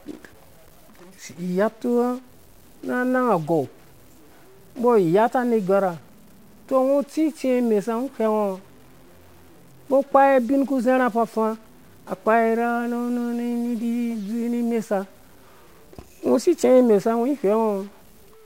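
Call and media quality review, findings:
Stuck bit, throughout: added noise on the speech and hiss filling the pauses. Likely one converter or data line bit held fixed, shifting about half the sample values by that bit's weight.

Dropped samples, 13.52 s: single sharp click. Likely a few samples missing from the stream, a fraction of a millisecond, so the waveform jumps straight to a later value.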